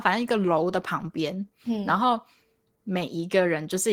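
Throughout, the speech sounds hoarse, slightly robotic and coarse-edged: Opus voice compression, its excitation coded roughly, which fits a low bitrate around 16 kbps.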